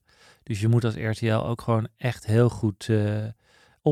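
No technical faults can be heard anywhere in the speech recording. There is nothing in it that needs a timestamp or a fix.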